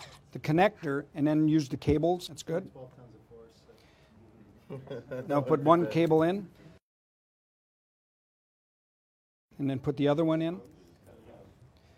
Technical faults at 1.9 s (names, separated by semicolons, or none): none